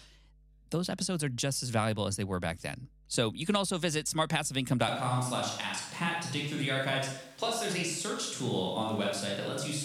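A ground loop or a nearby transformer is letting the 50 Hz power line leak into the signal path for the whole recording. The result is a steady low hum at 50 Hz with some low harmonics, sitting about 30 dB below the speech. It never changes, carrying on as a constant drone throughout.

From 4.88 s to the end, the close microphone's signal most likely dropped out, leaving a switch to a distant microphone further from the talker. The change is sudden. The speech turns roomy and hollow, and the bass thins out. The overall level stays about the same, but the room and background noise rise to roughly 30 dB below the speech.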